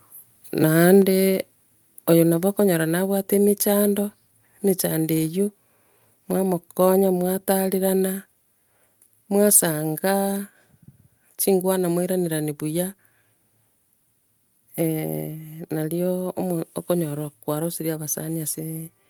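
Microphone volume stepped down at 1.02 s: speech and background fall about 3 dB at once, likely the call software lowering the microphone's input volume.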